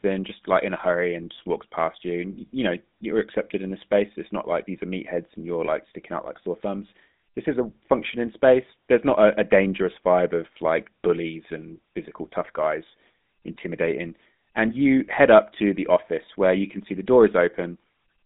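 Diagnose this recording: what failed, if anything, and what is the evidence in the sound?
The failure sits at the codec stage. The speech has passed through the GSM full-rate codec, and the damage is plainly audible from start to finish. The line runs roughly from 150 Hz to 3.7 kHz, with nothing above 3.8 kHz. The speech carries a buzzy, gravelly roughness. The coder rebuilds speech from a vocal-tract model excited by regular pulses on a thinned excitation. That gives the grainy texture, which fits the 13 kbps full-rate coder.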